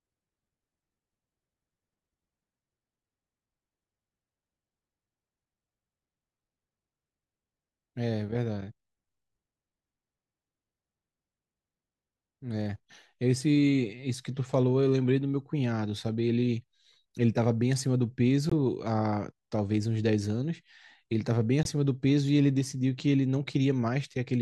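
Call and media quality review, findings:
Corrupt frame muted: abrupt silent holes at 18.50 s (about 34 ms, fits one frame) and 21.63 s (about 40 ms, fits two). Decoder rejected damaged frames; player substituted silence, timing kept.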